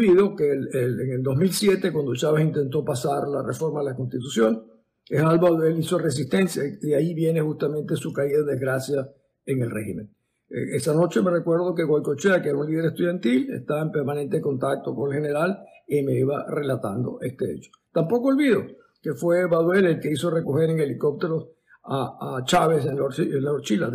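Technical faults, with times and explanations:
Nothing stood out on listening to this audio; no technical fault was heard at any point.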